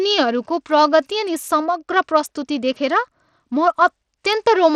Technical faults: Bluetooth SBC compression

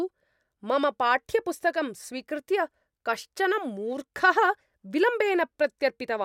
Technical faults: none

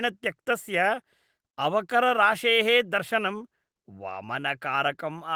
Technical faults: none

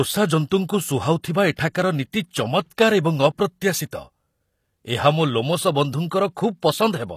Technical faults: HE-AAC compression; pre-echo

